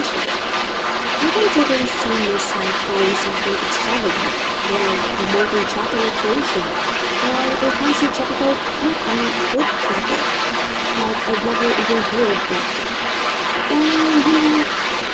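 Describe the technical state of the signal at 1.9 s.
At 1.9 s there's the other side's voice leaking through, running from 0.0 to 15.1 s at roughly the talker's own level, likely loudspeaker echo the canceller didn't fully remove.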